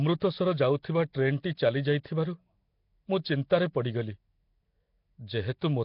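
Throughout, the speech has a rough, hissy halo and smeared underwater blur with nothing above 5.3 kHz. The spectrogram shows noise-filled blocky patches, likely from heavy Nellymoser compression.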